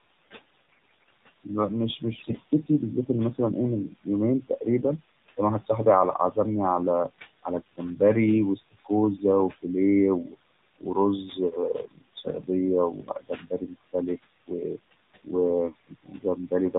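Speech recorded over a mobile link, with room noise sitting about 15 dB below the talker. Throughout, noise suppressor artifacts are audible. The suppressor pulls the background down by about 19 dB between phrases and lets it rise under speech. The AMR narrowband mobile codec also runs the whole way through. Nothing above 4 kHz survives. The buzzy, synthetic timbre and swirling background fit a low AMR-NB mode, around 7.4 kbps. From 0.55 to 1.09 s and again from 2.14 to 2.38 s, AMR bit errors roughen the voice. Pitch and level roughly hold, but the sound turns hoarse, scratchy and gargly. Flipped, less protected bits in the frames misplace the excitation pulses and throw off the finer pitch, gain and spectrum values. Speech cut by the noise suppressor occurs from 1.44 to 5.69 s, 7.43 to 8.0 s, 8.56 to 9.65 s and 10.24 to 16.74 s. Soft consonants and word endings drop by up to about 21 dB and sound swallowed. 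The last stretch is hit hardest, losing around two seconds in total.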